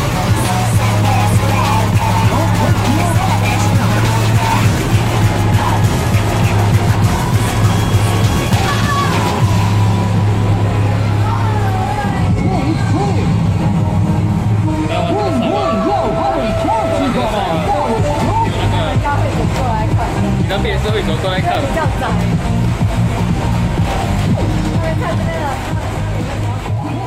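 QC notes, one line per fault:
8.53 s and 21.55 s, dropped buffer (overrun): the likely cause is the capture software failing to read its samples before the hardware wrote over them, discarding about 10 ms each time. The audio on either side butts together with no gap, so each spot gives a small jump forward.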